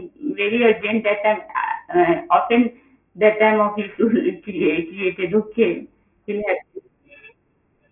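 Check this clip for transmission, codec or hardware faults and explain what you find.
There's one fault, and it runs through the whole clip: aliasing. The speech sounds like it was downsampled without an anti-alias filter, which fits a drop to a 6 kHz rate. Everything above 3 kHz folds back below it as unrelated tones, roughly 15 dB under the speech. Sibilants turn gritty and metallic, and the spectrum crowds right up against 3 kHz.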